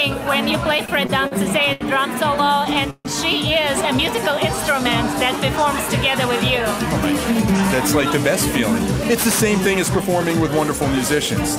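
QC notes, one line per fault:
0.85–1.83 s and 2.45–3.07 s, repeated stalls (stutter): packets kept arriving late or slower than playback, so the jitter buffer ran dry five times in each run. Each time the receiver stretched out the last sound until data resumed, filling 191 ms and 183 ms (longest waits 80 ms and 145 ms). That covers 20% and 29% of each span. Nothing is lost, but the audio drags and hitches repeatedly.
9.04–10.70 s, jitter buffer speed-up: the buffer had built up more audio than its target, so the receiver trimmed it back by cutting many short pitch-period-length pieces in succession, around 70 ms in total. Playback runs at 104% speed with pitch unchanged, a small push forward that stays just under the point where audio typically starts to sound hurried.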